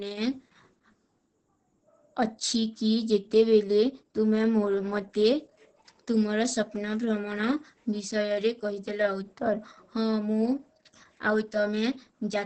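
Across the whole speech clip, Opus voice compression is audible: nothing remains above about 8.8 kHz, and heavy damage from the linear-prediction coder's coarse excitation makes the voice muffled, hoarse and slightly robotic, which fits a bitrate near 10 kbps.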